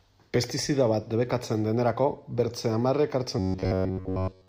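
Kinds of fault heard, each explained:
Robotic sound from repeated short buffers: From 3.39 s to 4.48 s the speech collapses into a rigid, metallic buzz at about 94 Hz, with essentially all of that stretch affected. The likely cause is audio arriving too slowly, so a fragment of roughly 10.7 ms is looped in place of the missing signal. On a waveform this shows as an identical short shape repeating; a spectrogram shows evenly spaced horizontal harmonics at multiples of 94 Hz.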